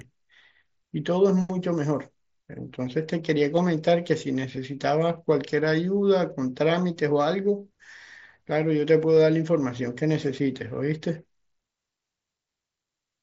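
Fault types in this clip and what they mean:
concealed Bluetooth headset packet loss: three brief glitches at 3.56, 4.57 and 9.16 s, where the speech briefly repeats itself for 15 ms, then 7.5 ms each. Packets from the headset went missing, and the phone patched each gap by copying the best-matching stretch of preceding waveform.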